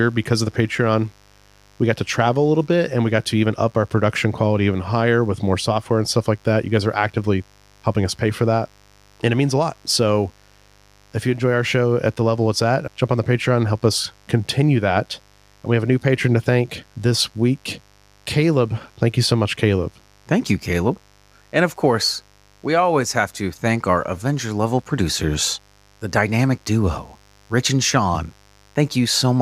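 A steady, raspy mains buzz sits under this speech recording for its whole length, roughly 35 dB below the voice. Switching spikes from 50 Hz mains put a ladder of harmonics reaching several kHz on a spectrogram, with periodic spikes repeating every 10 ms in quiet waveform gaps.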